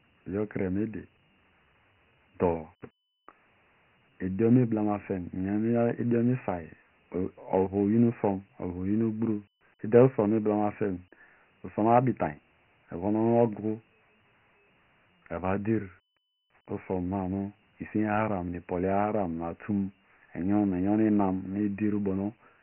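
From start to finish the speech carries Dialogic VOX ADPCM damage. The band stops dead near 3.1 kHz, which points to the 6,000-samples-a-second form of this 4-bit telephony codec, around 24 kbps. The coarse step-size adaptation is heavy here: a gritty hiss clings to every syllable and swells with loudness. On a spectrogram there is a flat ceiling at 3.1 kHz and a speckled noise layer tracking the speech energy, and the waveform looks fuzzy and stepped.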